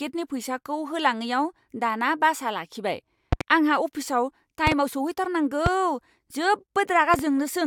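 Loud pops land just after "दाना बासआ लाखिबाय" at 3.33–3.43 s, then at 4.67–4.74, 5.66–5.69 and 7.14–7.22 s. Each is a sharp thump standing well above the speech, which keeps going underneath. All are double except the single one at 5.66 s, likely from voltage spikes off a switch or static.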